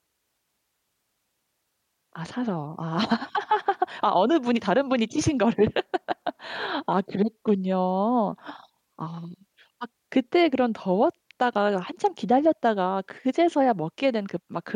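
Nothing in this speech recording stood out as a technical problem on listening.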